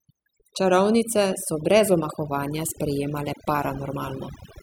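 From the first moment to the last, the speech carries overdone noise removal. The noise reducer was pushed too hard, so any frequency band sitting close to its idea of the noise floor got pulled right down or switched off, and the quieter parts of the voice went along with it. You can hear it in the gaps as near-silence with little twinkling specks.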